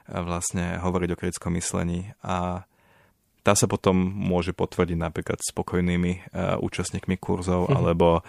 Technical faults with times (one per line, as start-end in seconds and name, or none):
none